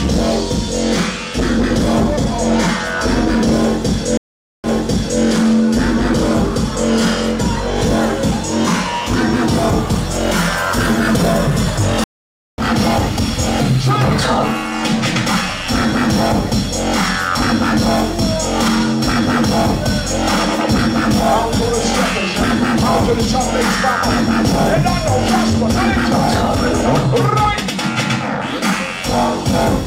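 At 4.17 s and 12.04 s the stream reconnects: the connection drops, about 0.47 s and 0.54 s of silence follow, and a fresh decoder restarts. Unlike a plain dropout, the audio resumes elsewhere, first replaying about 0.58 s, then skipping roughly 0.7 s ahead.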